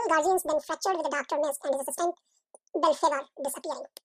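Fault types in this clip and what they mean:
Audio read two samples at a time (double speed): the reader treated each pair of samples as one frame, so the speech plays twice as fast and 12 semitones higher.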